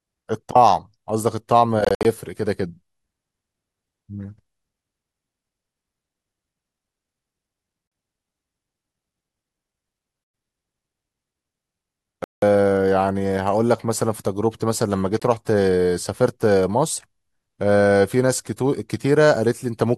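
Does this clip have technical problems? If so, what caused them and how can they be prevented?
Yes. The speech has abrupt silent holes at 1.85–2.05 s (several short gaps totalling about 0.12 s), 7.88–7.92 s, 10.24–10.34 s, 12.24–12.43 s and 15.20–15.22 s. The likely cause is Bluetooth dropout: audio packets arrived too late and were discarded. Unlike a buffer underrun, the speech resumes further on, as if it had kept playing, rather than picking up where it stopped. To prevent it, keep the headphones close to the source with a clear line of sight and away from Wi-Fi and other 2.4 GHz interference.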